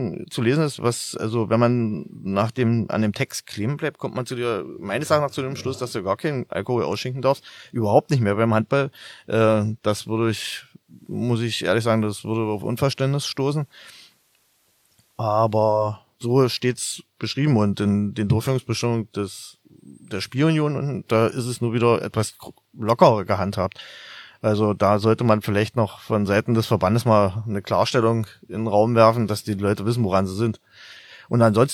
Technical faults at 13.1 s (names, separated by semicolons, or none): digital radio blending to analogue